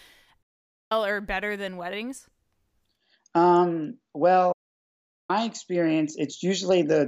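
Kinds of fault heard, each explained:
Digital broadcast dropout: the receiver mutes on corrupted frames, so speech snaps to clean silence for 0.48 s and 0.77 s, without the hiss of analogue fading.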